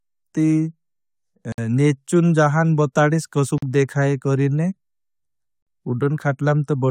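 Short silences cut into the speech at 1.52 s before "नेचुन जहान बोठाडीश", at 3.58 s before "देखाये करेने", and at 5.62 s, lasting 58, 43 and 43 ms with smeared edges. Recurring every 2 s, these are gaps at a join of encoded pieces. Each segment was encoded separately and spliced untrimmed, leaving encoder delay and end padding in place.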